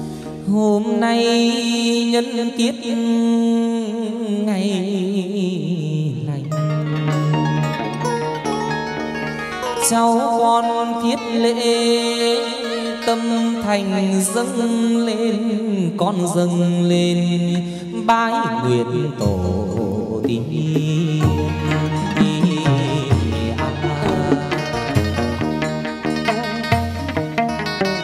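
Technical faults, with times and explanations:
No technical faults are heard in this clip.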